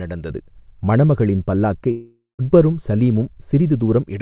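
De-emphasis applied wrongly runs from 0.30 to 4.06 s. A treble cut intended to reverse pre-emphasis landed on audio that had none, or was applied twice, tilting the response smoothly downward to about 11 dB below 1 kHz at 10 kHz, so the speech sounds dull and muffled throughout.

A long network dropout is the likely cause of the break from 1.91 to 2.42 s. Roughly half a second of audio never arrived. The receiver stretched the last sound into a fading buzz or hiss, leaving about 0.17 s of near-silence, before speech resumed with the lost portion gone. Everything sits within a band ending at 4 kHz, which fits a G.711 mu-law call path at 64 kbps.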